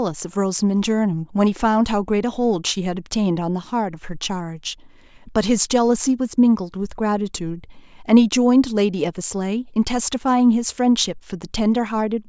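No technical faults are audible anywhere in the recording.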